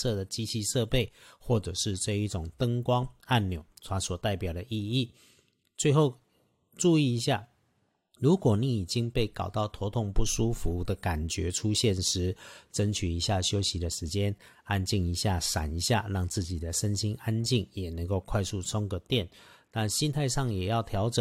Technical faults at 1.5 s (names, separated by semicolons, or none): none